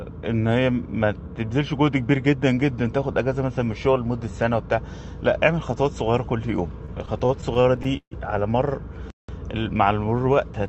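From 6.85 s to 8.14 s the sound falls into repeated stalls, a stutter. Packets reach the receiver late or too slowly. The jitter buffer runs dry ten times in this span. Each time, the last sound is stretched to cover the wait. About 0.3 s is filled this way, nearly a quarter of the span. The longest gap lasts 143 ms. Nothing is lost. The sound drags and catches instead.

At 9.10 s the output goes silent for about 183 ms, a playback stall. The sound breaks off in mid-flow and resumes at 9.29 s. The likely cause is the player running out of data, or its thread being blocked, until it recovers. The stall comes through a call path whose coding caps the top end near 8 kHz, which fits Opus at around 32 kbps.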